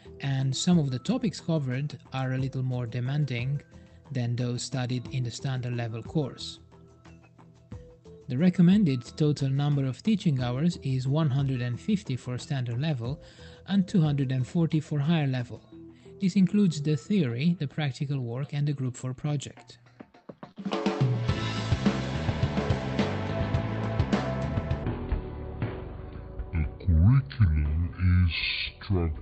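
At 20.51 s there's a short concealed packet loss. About 40 ms of the call never reached the decoder in time, so the receiver covered the gap by extending what it had just played and then blending back into the real signal around 20.57 s. You hear it as a quick smear or little wobble, and anything very short that fell inside that window can simply drop out. The top end stops around 8 kHz, which fits an Opus call path running at something like 32 kbps.

From 24.84 s to the end, the section is at the wrong speed. It runs at 0.565 times its proper rate, and pitch drops with it, roughly ten semitones down, so everything turns deep, dragging and slow. The change comes in suddenly rather than easing in. The likely cause is a player or editing step fitting that stretch to the wrong clock, which slows timing and pitch together instead of treating them separately.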